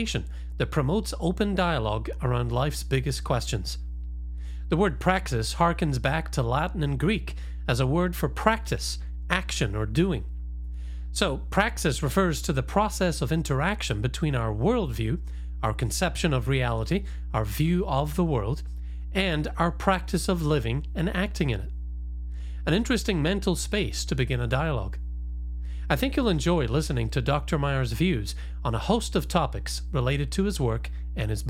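A speech recording with mains hum from start to finish. A steady 60 Hz tone sits nearly as loud as the speech, from a ground loop or nearby transformer.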